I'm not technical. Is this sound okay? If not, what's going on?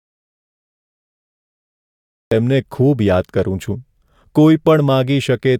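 No. There's an audio dropout to silence from the start until 2.31 s, with no background sound; speech starts mid-flow. The input was likely disconnected or muted.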